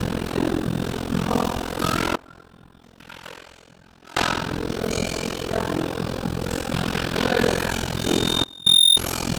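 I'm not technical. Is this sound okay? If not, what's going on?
No. Throughout the clip there is overlap-add ripple. The sound was split into long overlapping chunks and rejoined unevenly, so the level pulses very deeply about 40 times a second. It comes across as a fast, rough flutter over everything.

There are two sudden gain jumps. From 2.16 to 4.17 s, and again from 8.44 to 8.66 s, the sound and its background noise abruptly drop much quieter, then snap back. The likely cause is a volume setting being switched instantly instead of faded.

From 7.96 to 8.99 s there is loudspeaker feedback squeal. A microphone was hearing its own speaker, and a single high tone near 3.6 kHz swells over about a second until it stands well above the sound itself.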